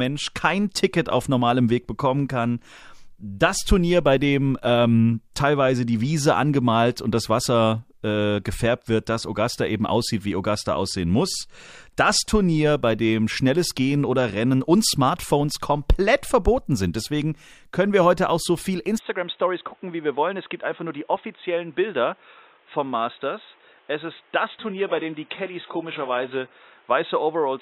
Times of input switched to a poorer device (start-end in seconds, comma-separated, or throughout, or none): 18.98-27.62